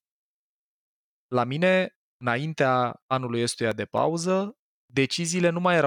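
CD scratch ticks run from 3.19 to 4.76 s in this speech clip: seven brief clicks, each under a couple of milliseconds, recurring about four times a second as a disc blemish exceeds error correction on each revolution.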